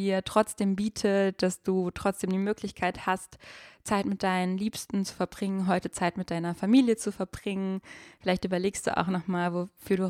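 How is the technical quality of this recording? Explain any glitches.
The technical quality of this recording is sound, and there are no glitches to explain.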